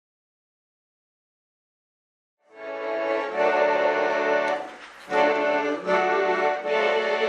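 The audio, which fades in smoothly from around two and a half seconds to full level at 3.42 s, has a corrupt frame decoded from 4.86 to 4.90 s. Damaged compressed data, about two frames' worth, was played anyway and heard as a brief glitch. On a spectrogram it shows as a short block of energy at the wrong frequencies; the waveform shows a sudden 44 ms disturbance.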